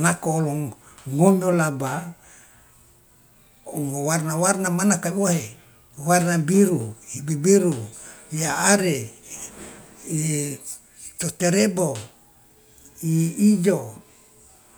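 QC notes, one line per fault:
No faults found on this speech clip.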